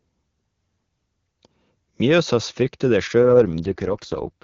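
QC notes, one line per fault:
3.23 s to the end, AMR rate drop: the speech abruptly turns rough, raspy and synthetic, with no gap and no loss of bandwidth. The link pushed the AMR-WB codec down, which fits a fall from 23.85 to 6.6 kbit/s, with the freed bits going to error protection.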